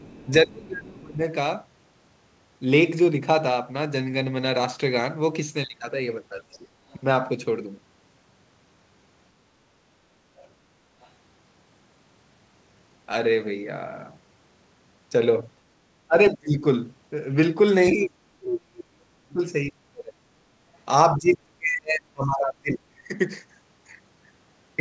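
Other side's voice leaking through at 0.0 to 0.3 s: a faint second voice sits about 30 dB under the speech, most likely loudspeaker playback reaching the microphone and surviving the echo canceller. It returns from 6.53 to 6.98 s at a similar level, and as a brief scrap at 11.01 to 11.08 s, about 35 dB down.

Speech suppressed in double talk from 0.44 to 1.23 s: the talker's level sags by up to roughly 25 dB. The likely cause is an echo canceller that, with both sides active, could not separate near speech from echo and attenuated everything. Further dips follow at 6.41 to 6.72 s (about 20 dB, overlapping the second leak), 16.08 to 16.65 s, 17.93 to 20.2 s and 21.16 to 23.11 s. The last three reach about 35 dB. Across the clip, the band stops at 8 kHz, which fits a wideband call codec.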